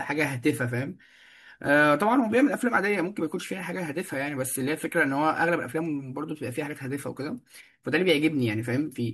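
No technical faults can be heard anywhere in the recording; the signal stays continuous and steady throughout.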